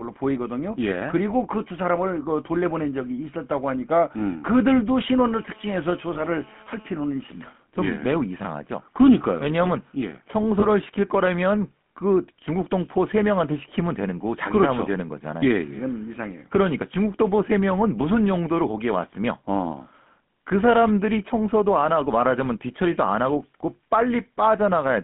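A buzzy, gravelly roughness runs through the whole recording, with the low end thinned below about 150 Hz and everything above 3.4 kHz missing. This is the GSM full-rate codec, whose damage is plainly audible here. It fits the 13 kbps full-rate scheme, which rebuilds speech by driving a vocal-tract model with evenly spaced pulses that keep only a third of the excitation samples, and that sparse excitation produces the grainy texture.

From 6.14 to 6.20 s, and again from 10.60 to 10.64 s, the sound briefly freezes into a short rough, metallic ring. These are lost GSM frames, each about 20 ms of missing data. In each case the decoder filled the gap by reusing the parameters of the last good frame, so the sound holds and rings for a moment instead of dropping out.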